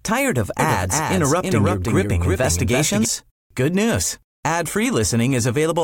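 From 0.59 to 3.05 s a doubled audio track appears. A second copy of the speech trails the first by roughly a third of a second, about 5 dB quieter. It is dry and unchanged, likely from a slower capture path, and cuts in and out abruptly.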